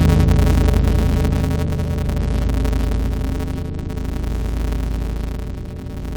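Throughout the music, interleaved audio is being read as planar: each block of alternating left and right samples is split so its first half feeds the left channel and its second half the right, which fits a 256-sample block. With blocks only 5.8 ms long, the half-speed playback inside each block does not produce a clear octave drop. Instead the music turns dull and robotic, with a steady buzz at the 172 Hz block rate.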